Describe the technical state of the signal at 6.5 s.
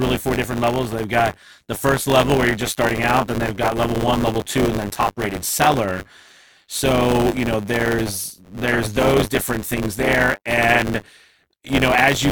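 At 6.5 s the speech carries a robotic 100 Hz buzz that runs throughout the clip whenever there is signal. This is buffer tearing: writer and reader cross inside each buffer, so roughly 15% of every period replays audio about 20 ms old, with hard joins.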